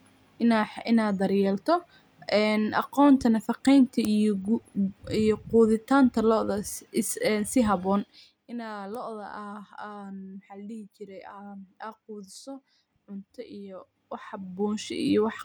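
From 7.96 to 8.44 s the speech drops by roughly 15 dB in audible steps of about 1 dB, and from 13.72 to 15.12 s it rises by a similar amount. Both moves show zipper noise. The gain jumps about thirty times a second with no smoothing, and each jump clicks. The waveform shows a staircase envelope, and the spectrogram shows evenly spaced vertical lines through both ramps.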